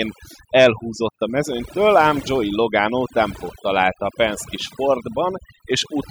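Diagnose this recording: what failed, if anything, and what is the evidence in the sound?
Overdone noise removal in the call-processing stage, present throughout the speech. Between phrases the background drops to near silence with twinkling specks. The suppressor is cutting individual frequency bands that sit near its noise estimate, taking quieter speech components with them.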